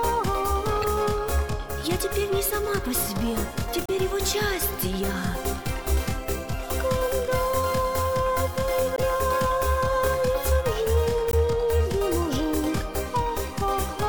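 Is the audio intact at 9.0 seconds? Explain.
No. Just before 9.0 seconds, from 8.96 to 8.99 s, there is damaged data in the compressed stream. For about 28 ms the decoder meets bytes that don't form valid frames. It misreads or discards them, loses its place in the stream, and hunts for the next frame header before playback resumes. That brief failure comes through as a short chirp or blip, a sudden foreign sound in place of the audio.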